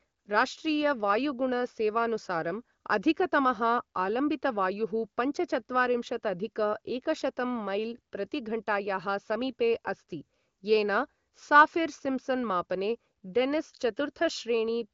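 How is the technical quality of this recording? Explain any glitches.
The technical quality of this recording holds up well, and there are no glitches to explain.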